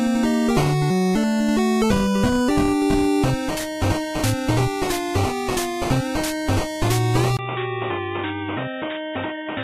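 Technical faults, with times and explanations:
7.37–9.64 s, input switched to a poorer device: after a brief gap of about 20 ms, the sound abruptly turns dull and boxy, with nothing above 3.8 kHz. It becomes a few decibels quieter, and a new, faint background noise sits roughly 30 dB below the signal until the end. The sudden, lasting change in bandwidth, tone, level and noise floor is likely the recording switching mid-take to a narrower-band microphone or a headset's call profile.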